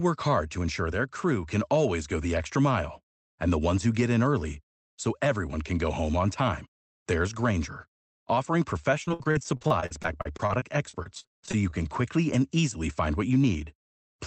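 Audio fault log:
9.03–11.73 s, repeated packet loss (robotic sound): short dropouts follow one another throughout this stretch, the longest about 52 ms. Each hole is bridged by stretching the previous sound, so nearly a quarter of the span is synthetic fill, giving a choppy sound with pieces missing.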